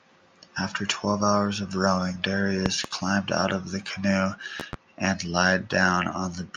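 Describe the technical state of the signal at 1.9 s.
At 1.9 s the speech signal is intact, with no audible fault at that moment.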